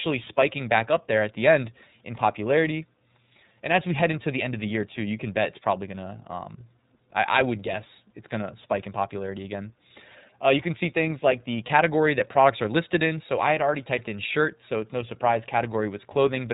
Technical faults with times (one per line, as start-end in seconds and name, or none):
0.00-16.54 iLBC codec